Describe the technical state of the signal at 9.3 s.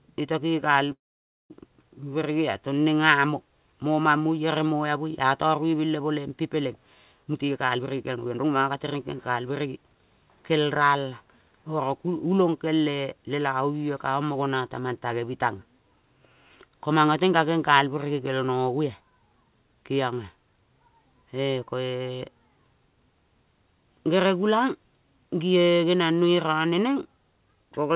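At 9.3 s the audio is inside a jitter buffer speed-up running from 7.23 to 9.84 s. The receiver trims short pitch-period slices to drain excess buffering, so the speech plays about 22% fast at unchanged pitch.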